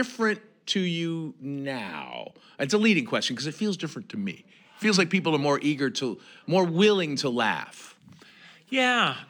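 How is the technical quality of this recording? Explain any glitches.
The recording has one clear glitch, in the middle of the speech.

From 3.77 to 5.42 s there is a drift correction step. Playback slows by 5.3% and pitch drops about 94 cents, nearly a semitone, then snaps back. The cause is likely clock-matching software changing the rate in a single step. A spectrogram shows the harmonics shifted down as a block with abrupt edges.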